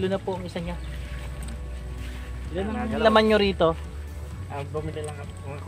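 No dropouts, clicks, distortion or level problems occur anywhere in the audio.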